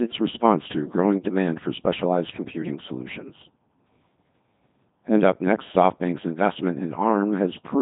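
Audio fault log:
throughout: Codec 2 vocoder. The speech has been through Codec 2 and is heavily damaged. It sounds robotic and buzzy, and the degree of coarseness fits a rate of about 2.4 kbit/s. Only pitch, voicing, energy and a rough spectral envelope are carried, and the decoder rebuilds the voice from sine waves, so none of the original waveform survives. Nothing remains above 3.8 kHz, which removes the brightness and detail of consonants.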